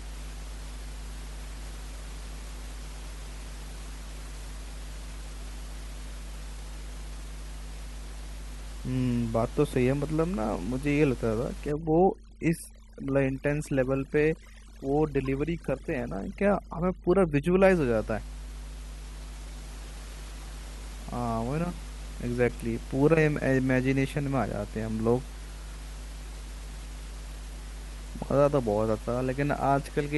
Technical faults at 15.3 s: mains hum; overdone noise removal; corrupt frame decoded

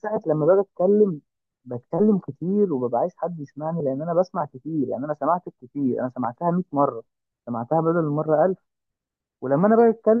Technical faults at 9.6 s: none

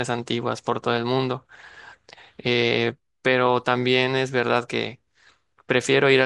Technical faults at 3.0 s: none

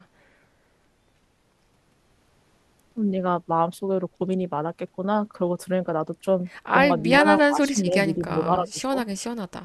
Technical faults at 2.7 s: none

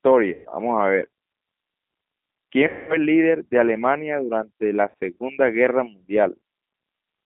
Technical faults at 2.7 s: G.729 codec; VoIP packet loss concealed by the speech codec

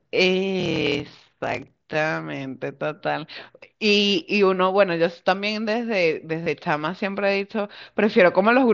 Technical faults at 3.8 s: none

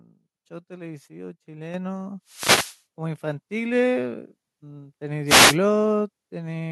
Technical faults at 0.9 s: none

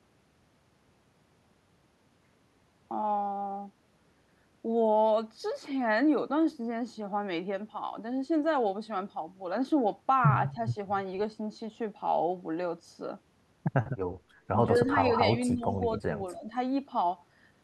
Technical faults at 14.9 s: speech suppressed in double talk; echo leak

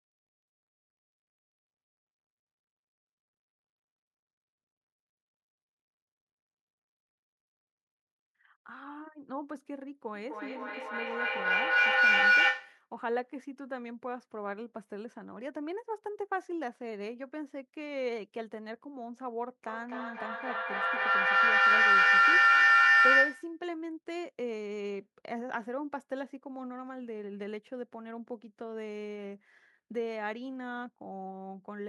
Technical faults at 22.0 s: feedback howl

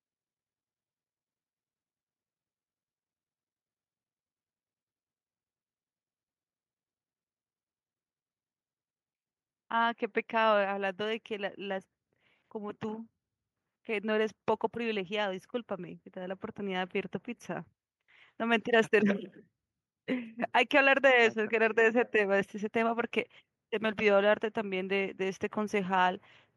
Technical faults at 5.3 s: none

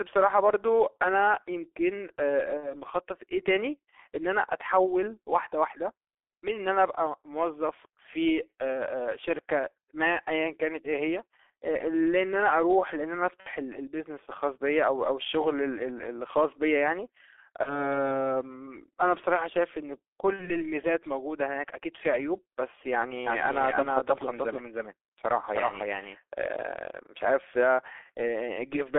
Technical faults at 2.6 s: G.723.1 codec; VoIP packet loss concealed by the speech codec

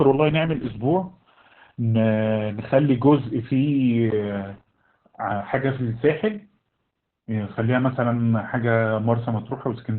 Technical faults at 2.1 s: Opus voice compression

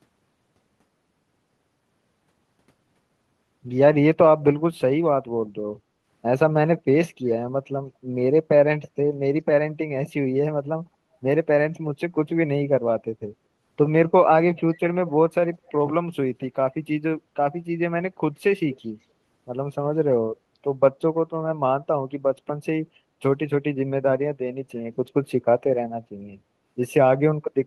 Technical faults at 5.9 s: background gated by the echo canceller

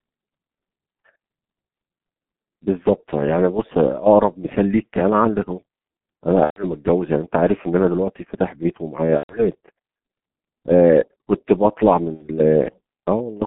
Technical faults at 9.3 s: G.723.1 codec; VoIP packet loss concealed by the speech codec

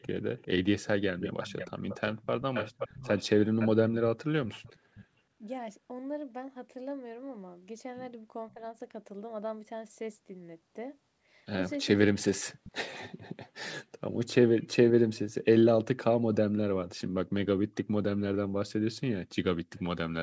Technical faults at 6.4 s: none

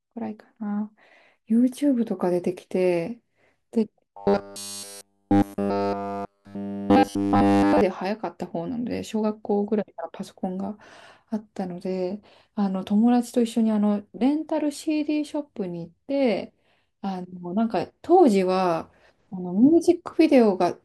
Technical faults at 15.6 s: none

